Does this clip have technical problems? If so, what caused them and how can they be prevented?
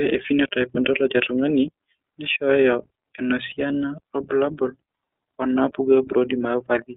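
Yes. iLBC codec damage runs throughout the speech: nothing above about 3.6 kHz or below 250 Hz survives, and each 30 ms frame is coded independently at about 13 kbps, leaving a rough, synthetic edge. Prevent it by carrying the call over a wideband codec.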